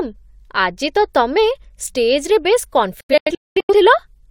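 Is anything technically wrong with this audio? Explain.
Yes. From 3.01 to 3.73 s there is a digital broadcast dropout: the receiver stopped getting valid frames and muted until good ones arrived. The speech breaks into several short holes, the longest about 0.21 s, each closing with a quick 3 ms fade, and nearly half a second is lost.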